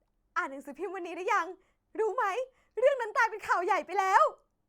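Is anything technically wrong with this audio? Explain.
No, nothing technically wrong turns up in this speech recording; it sounds perfectly fine as it is.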